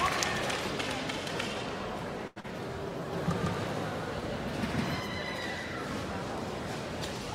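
At 2.27 s a short stall from a late packet begins. The jitter buffer ran dry, so the receiver extended the last sound for 87 ms until the packet arrived and resumed from the same point. Nothing is lost, but the sound hangs briefly with a faint buzz or dip.

Immediately after, from 2.40 to 2.46 s, a short concealed packet loss follows. About 60 ms of audio never reached the decoder. The receiver synthesised 36 ms to bridge the gap and pulled the timing back by roughly 20 ms, producing a brief smear where material drops out.

From 3.13 to 5.0 s there is a doubled audio track. A full-band second copy sits roughly 150 ms behind the original at about the same level, with no decay or room colour. It enters and leaves abruptly, most likely from a second, slower capture path mixed in.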